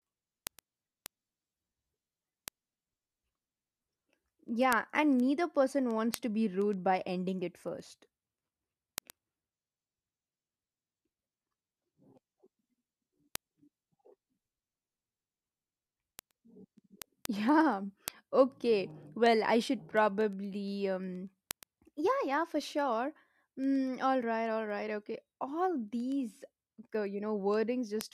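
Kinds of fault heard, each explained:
Word clock ticks: an unlocked receiver clock, drifting roughly 200 ppm from the sender's, slips what sounds like a single sample at each crossing, giving sharp ticks about ten times a second from 0.11 to 28.13 s. These show as evenly spaced thin vertical spectrogram lines and tiny waveform steps.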